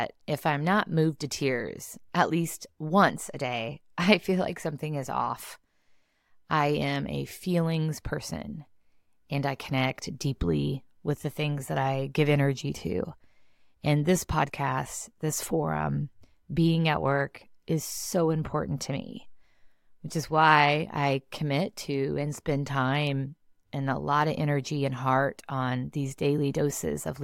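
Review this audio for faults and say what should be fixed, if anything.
Nothing in this speech recording needs fixing. No technical faults can be heard at any point in it.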